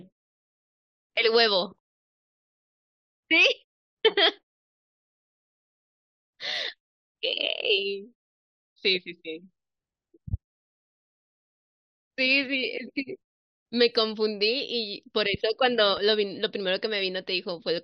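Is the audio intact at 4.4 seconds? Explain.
Yes, the audio at 4.4 seconds is intact, with no dropout, glitch or distortion at that moment.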